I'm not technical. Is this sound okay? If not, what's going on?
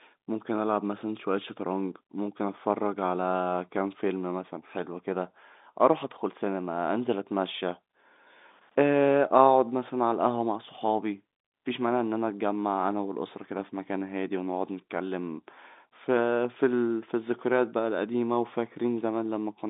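Yes, it's fine: the audio has come through an ordinary G.711 telephone coding connection, so it has that familiar narrow phone-line sound, which is simply how phone calls work rather than anything going wrong.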